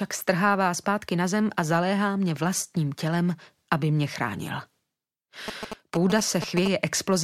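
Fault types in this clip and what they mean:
GSM signalling bursts: A galloping dit-dit-dit of short buzzes at about 217 Hz, fairly loud against the sound, from 5.48 to 6.68 s. A nearby 2G phone sending short signalling bursts is being picked up and rectified by the audio circuitry.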